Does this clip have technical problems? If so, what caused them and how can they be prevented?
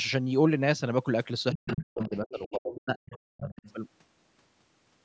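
Yes. The other side's voice is leaking through at 1.52–1.83, 2.02–2.55, 2.73–2.81, 2.97–3.17 and 3.37–3.73 s, sitting roughly 10 to 25 dB under the talker. It's likely loudspeaker playback that the echo canceller didn't fully subtract from the mic. Using a headset, or a better-tuned echo canceller, would keep it out.

Between 1.54 and 3.67 s, the speech is suppressed in double talk. About a second and a half of it gets pushed down, by as much as roughly 40 dB, while the far end is talking too. The likely cause is the canceller failing to separate the local voice from the echo and attenuating both. A double-talk detector that tells them apart, or a headset, would avoid that.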